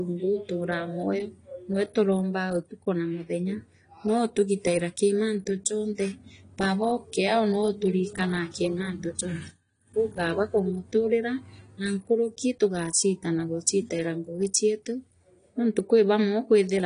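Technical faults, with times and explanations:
Throughout, AAC compression: nothing above 10 kHz, with a dull, smeared, warbling texture, likely from AAC-LC coding starving the spectrum at roughly 32 kbps.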